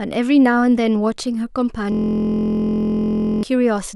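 From 1.92 s to 3.43 s there is a system hang loop: the computer or driver stalled while the audio hardware kept replaying one ring buffer. A 23.22 ms slice of speech repeats at 43.1 Hz, which fits a 1024-sample buffer, producing a steady buzz.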